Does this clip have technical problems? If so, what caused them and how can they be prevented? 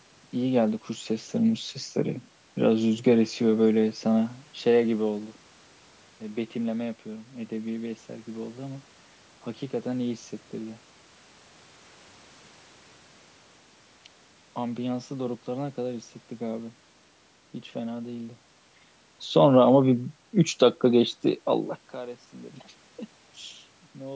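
No, nothing stood out as a technical problem on listening to this speech clip, so there is nothing here that needs preventing.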